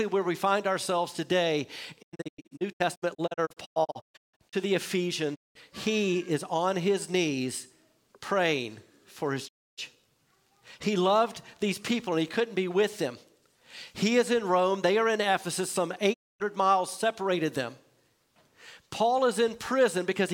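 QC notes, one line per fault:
2.01–4.55 s, 5.34–5.57 s, 9.47–9.80 s, 16.12–16.42 s: digital broadcast dropout. The receiver mutes with a 20 ms fade whenever frames fail to arrive intact. The first is a scattered run of holes up to 160 ms long; the later ones are single gaps of about 0.2–0.3 s. Programme sent during each gap is lost.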